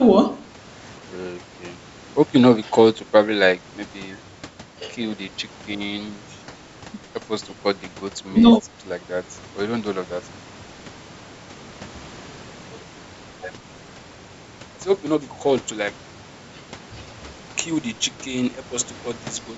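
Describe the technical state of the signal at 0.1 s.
At 0.1 s the speech signal is intact, with only the expected low-bass roll-off and upper limit of about 8 kHz from ordinary call microphone processing.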